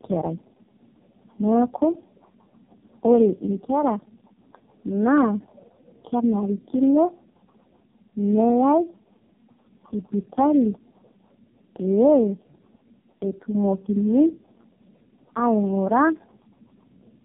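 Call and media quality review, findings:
Tandem speech coding, whole clip: rough, muffled, warbly speech, nothing above 3.4 kHz. Fits three low-rate codecs in a row (G.729A, then AMR-NB 5.9 kbit/s twice), with G.711 hops between, each re-encoding the previous coder's artefacts.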